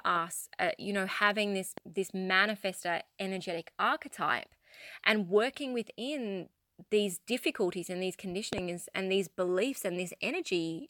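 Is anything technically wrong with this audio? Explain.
Yes, there are two loud pops in the speech. The first, at 1.78–1.80 s between "you know having this" and "this manifestor energetic archetype", is a single sharp click a little above the speech. The second, at 8.53–8.60 s between "these difficulties and these" and "and these beliefs", is a double pop well above the speech level. Both are likely a sudden voltage spike from a plug, switch, static or driver glitch, and the speech continues underneath each one.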